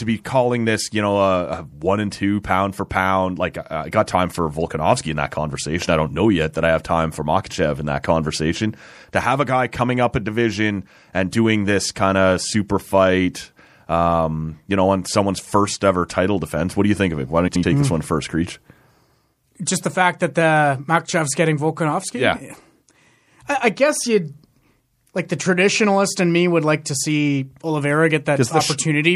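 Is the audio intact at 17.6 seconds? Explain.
No. From 17.47 to 17.64 s there's a frames-out-of-order fault. Two adjacent blocks of about 78 ms each, which fits three MP3 frames apiece, got swapped and decoded in that order. So that short stretch plays back with its halves exchanged and you hear a garbled little flutter. Nothing's missing; the timing stays intact, it's just shuffled.

Underneath that, the whole clip has plainly audible MP3 compression damage: a watery, swirly texture with metallic chirps on the s sounds and smeared onsets, as weak frequency components flicker in and out and the top end is cut off. That points to a low bitrate, likely around 64 kbps, where the encoder runs short of bits.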